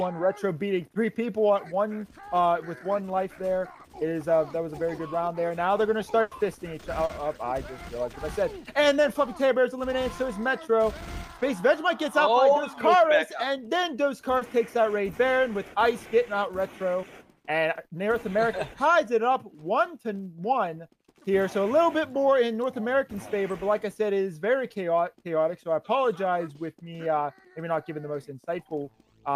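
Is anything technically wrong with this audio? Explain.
Yes. The audio has network packet loss in four places.

From 6.21 to 6.33 s there is a burst of packet loss. About 100 ms of audio never arrived in time. The receiver kept extending the last sound and faded it down over that span. You hear a held, dimming tail instead of new material. Then the audio picks up again further along. The 100 ms in between is simply gone, so the sound jumps forward.

There are three instances of short concealed packet loss: 7.05 to 7.11 s, 11.39 to 11.43 s, and 14.37 to 14.43 s. Each hole lasted 40 ms, 20 ms and 40 ms respectively. The decoder patched each gap by continuing the preceding sound, then blended back into the real signal. These are too brief to read as dropouts. They come across as a quick smear or wobble, and a very short sound may be lost inside the patch.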